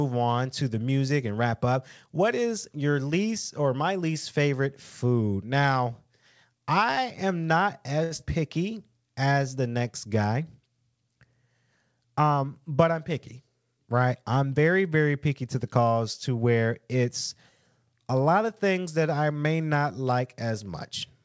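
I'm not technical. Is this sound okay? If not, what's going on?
No, there are a few glitches in the speech, all packed into two short moments.

At 8.04 s there's a short stall from a late packet. A chunk of audio turned up late, so the call software held the last sound for about 67 ms until it arrived, then carried on. Nothing's lost, but one sound drags slightly.

Right after, at 8.17 to 8.20 s, there's a short concealed packet loss. About 20 ms of audio never arrived in time, so the software patched the gap by extending what came before. You'd hear a tiny smear or wobble there.

From 12.16 to 12.69 s there's a jitter buffer speed-up. Audio had piled up, so the software trimmed tiny slices to catch up, running about 12% fast. A bit under a tenth of a second gets cut, so it sounds briefly hurried.

The call line also cuts everything above 8 kHz, which takes a little crispness off the top.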